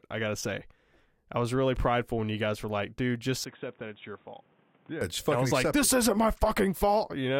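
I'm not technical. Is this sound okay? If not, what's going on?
No. From 3.44 to 5.01 seconds, just after "were like dude just", the recording likely switched to a poorer input device, such as a different microphone or a headset's call mode. That device captures nothing above 3.8 kHz, so the speech suddenly turns dull and boxy, becomes noticeably quieter, and picks up a faint new background noise. The change happens with no gap, and the original clearer sound returns at 5.01 seconds.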